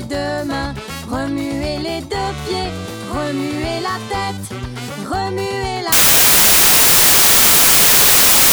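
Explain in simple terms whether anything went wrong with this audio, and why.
Samples built from the wrong bytes take over from 5.92 s to the end of the clip. Each sample in a digital file is stored as a small group of bytes, and here the player put those bytes together in the wrong order or alignment. The tiny, rapidly changing details ended up treated as the loudest part of each value, so the sound turns into harsh, loud hiss.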